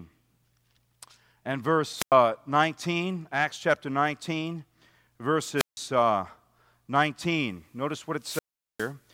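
At 1.96 to 2.14 s, 5.56 to 5.78 s and 8.21 to 8.93 s the speech hits wireless microphone squelch dropouts: the radio link fades, hiss swells, then the receiver's squelch mutes for about 95, 159 and 407 ms before the voice returns.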